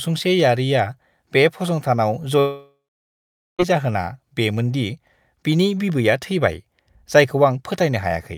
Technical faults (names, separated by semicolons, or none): long network dropout